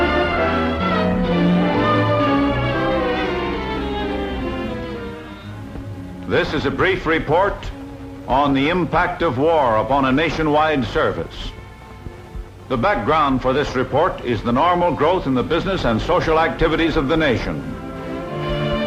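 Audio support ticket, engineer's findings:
No faults found: level steady, no dropouts, clicks, distortion or timing errors detected across the signal.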